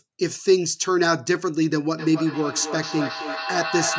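Speech with feedback echo between two devices from 1.97 s to the end: another device's playback re-enters the microphone, repeating words roughly every third of a second, peaking about 7 dB below.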